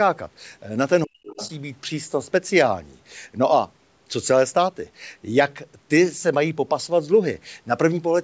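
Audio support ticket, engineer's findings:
Speech suppressed in double talk, 1.05–1.4 s: near-end speech ducks hard, bottoming out roughly 40 dB down, with about 0.3 s affected in total. Likely cause: the echo canceller's suppressor fails to separate the talker from loudspeaker echo while both sides are active and attenuates everything. This differs from a plain dropout because the dip coincides with far-end activity and is gain-driven, not a gap in the stream.

Other side's voice leaking through, 1.27–1.49 s: a second voice is audible under the ducked passage, roughly 20 dB below the talker, as a short scrap. Likely cause: incomplete echo cancellation of the far-end playback picked up by the microphone. This differs from crosstalk or a second person in the room because it overlaps the double-talk window; the whole call path stops at 8 kHz.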